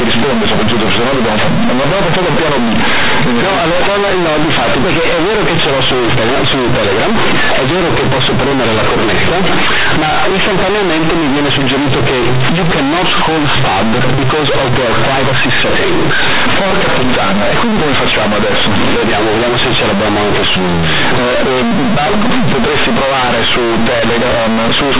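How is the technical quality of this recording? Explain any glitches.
The technical quality is very poor. The speech comes through a telephone path using G.711 mu-law coding, but the decoding is wrong from start to finish.

The fault is companded audio read as linear, and it lasts the whole clip. The mu-law bytes are played as plain 8-bit samples without expansion. Every sign change jumps across half the output range. Quiet passages become as loud as peaks. The result is harsh, buzzy distortion with heavy noise filling the pauses.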